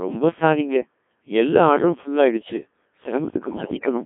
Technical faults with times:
0.00-4.06 Codec 2 vocoder
3.42-3.86 bit errors on digital voice radio

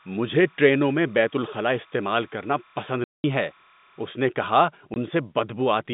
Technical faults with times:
0.00-4.16 timecode bleed
3.04-3.24 packet loss filled with silence
4.94 packet loss filled with silence

